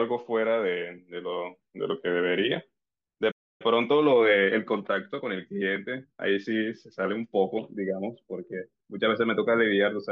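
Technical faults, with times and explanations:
3.31 to 3.62 s: playback stall. The speech cuts to silence for about 0.3 s mid-flow, likely because the player ran short of data, then resumes.
3.62 to 6.50 s: time-compressed catch-up. Speech runs hurried at 1.1 times speed, pitch unchanged, as small pieces are cut out and cross-faded.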